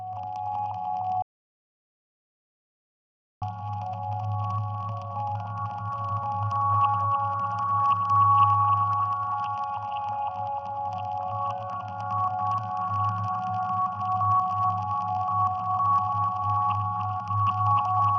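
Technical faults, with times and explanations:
1.22–3.42 s, audio dropout to silence: sound cuts out abruptly for 2.19 s of total silence without room tone, likely from a lost input link; the waveform flatlines and the spectrogram is blank.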